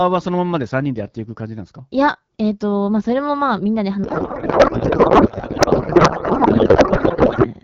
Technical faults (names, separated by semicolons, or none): codec payload misread